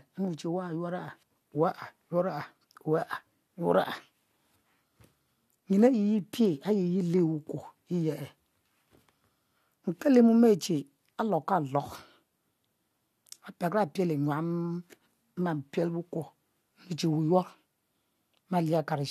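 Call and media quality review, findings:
No faults found in the speech audio; nothing in the capture, transport or playback path to flag.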